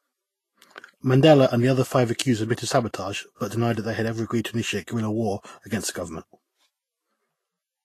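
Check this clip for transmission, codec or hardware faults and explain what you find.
One fault runs through the whole speech clip. Vorbis compression is likely the cause. Nothing is heard above 14.2 kHz. The treble sounds hissy and grainy, and attacks are blurred. Vorbis codes treble detail so coarsely that it turns to noise, which fits a low bitrate near 30 kbps.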